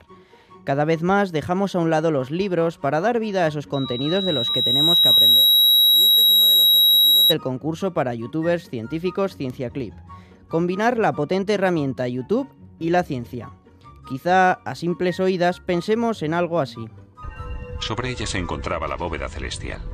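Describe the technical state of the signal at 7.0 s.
At 7.0 s a loudspeaker feedback squeal is sounding (3.73 to 7.35 s): a 3.8 kHz tone from a mic-speaker loop. Unlike a steady interfering whistle, it swelled over about a second and a half to roughly 10 dB above the sound.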